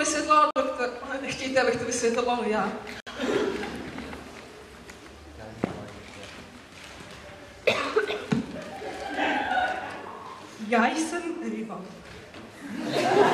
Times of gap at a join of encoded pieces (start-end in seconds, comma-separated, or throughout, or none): 0.51-0.56, 3.00-3.07